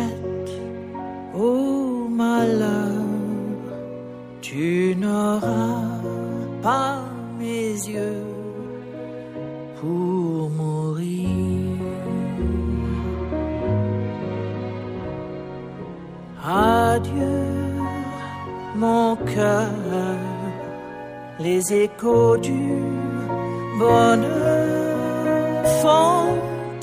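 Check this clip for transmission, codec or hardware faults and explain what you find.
Nothing wrong can be heard anywhere in this clip.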